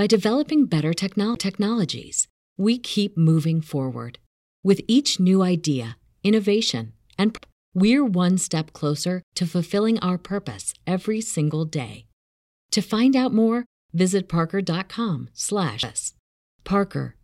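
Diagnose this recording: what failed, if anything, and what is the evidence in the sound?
A CD skip at the playback stage. Ticks with brief mutes occur at 1.35 s after "developing better", at 7.37 s before "we're one step closer", and at 15.83 s. The first mute is about 10 ms, the others far shorter. The laser jumped tracks and resumed elsewhere.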